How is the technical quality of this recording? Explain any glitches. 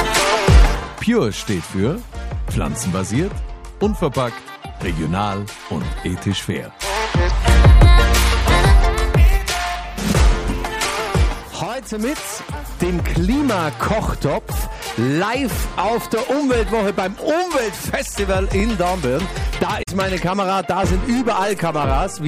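Two brief glitches occur close together near the end of the recording.

From 18.60 to 18.62 s there is a repeated buffer. New audio did not reach the output device in time, so it played its last block of samples a second time. The extra play lasts about 20 ms, which fits a 20 ms buffer. Essentially nothing is skipped afterwards, so the timing simply stretches slightly. The effect is a short stutter with a hard join where the copy begins.

From 19.79 to 19.89 s, roughly a tenth of a second, there is damaged data in a compressed stream. Bytes in the encoded file were corrupted at that point, so the decoder could not read those frames correctly. It lost sync and searched for the next valid frame header before resuming normal decoding. This produces a short chirp or blip lasting the length of the damaged region, in place of the intended sound.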